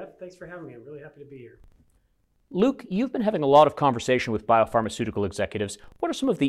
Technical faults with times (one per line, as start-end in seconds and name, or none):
0.00-6.49 filter restarted on every block